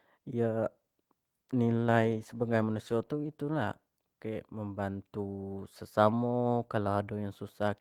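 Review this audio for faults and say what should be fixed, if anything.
The speech has a call bitrate drop from 1.69 s to 4.21 s. The encoder was told to spend far fewer bits. The sound turns rough and watery, and the high frequencies are cut back. The change fits a fall from about 40 kbps to about 18 kbps. The worst stretch lasts about 1.41 s. Quality then climbs back by 4.21 s. To prevent this, keep the uplink stable and set a higher minimum bitrate for the encoder.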